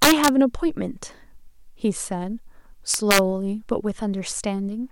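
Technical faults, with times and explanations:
0.03–0.28 s, integer overflow: speech peaks about 5 dB past the integer limit wrap to the opposite sign, producing violent full-range cracks far harsher than clipping.
2.94–3.19 s, integer overflow: a smaller overshoot of about 2 dB wraps the same way, giving cracks on the loudest peaks.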